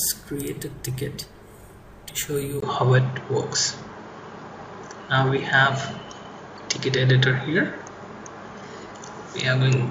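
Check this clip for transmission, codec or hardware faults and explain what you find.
One hardware fault is present. From 2.60 s to the end, the sound is consistent with the input switched to a poorer device, likely a changeover in microphone or headset profile. After a 20 ms gap, the band stops at 7.2 kHz, so the audio turns duller, with a modest level shift and a faint new background noise.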